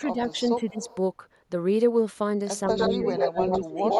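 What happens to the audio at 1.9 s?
Nothing goes wrong at 1.9 s; the speech carries on without any break, click, dropout or other audible fault at that point.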